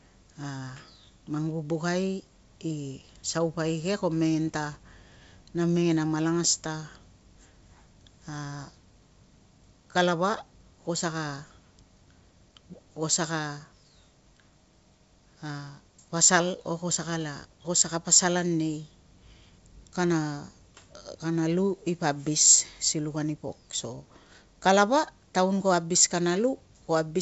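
No technical faults can be heard in this speech, which comes through G.722 wideband telephone coding at 64 kbit/s with nothing above about 7.7 kHz.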